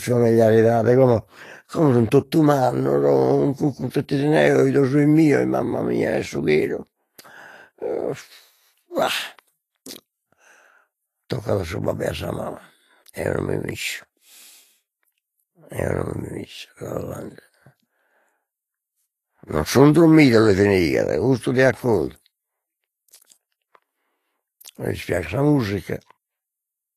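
A speech recording carrying plainly audible codec damage across its whole length, most likely Vorbis compression at a low setting, roughly what a 30 kbps stream would produce. Nothing survives above 14.2 kHz, and the upper treble that remains is grainy and hissy, with consonant onsets smeared. On a spectrogram this appears as a hard ceiling at 14.2 kHz, with the band beneath it broken into speckled, noise-like patches instead of clean harmonic detail.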